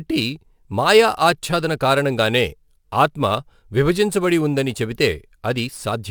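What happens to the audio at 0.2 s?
At 0.2 s you're hearing sample clock jitter, which runs through the whole clip. The converter's clock wobbles by a few microseconds, so each sample lands slightly off time, leaving a fine hiss-like roughness about 30 dB under the speech that grows on louder, brighter sounds.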